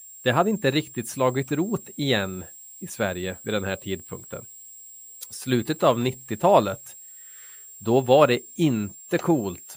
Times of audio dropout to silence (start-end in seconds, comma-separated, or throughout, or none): none